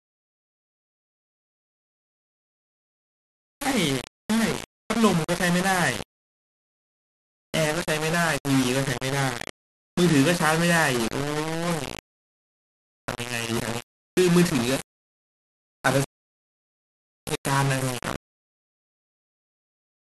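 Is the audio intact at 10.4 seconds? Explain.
No, it isn't. At 10.4 seconds the speech carries the same grainy, gritty distortion heard through the whole clip, which points to low bit depth without dither, likely around 4 bits with plain rounding. With so few levels, each sample snaps to a coarse step, and the error tracks the speech itself rather than sitting as a steady hiss. That error sits only around 10 dB below the speech, so quieter stretches sound rough and gritty.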